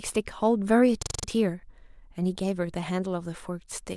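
Speech with a system hang loop from 1.02 to 1.24 s: one 42.7 ms piece repeats exactly five times, a 23.4 Hz stutter that fits a 1024-sample ring buffer. Identical repeats rather than silence separate it from a dropout, and roughly 200 ms of audio goes missing.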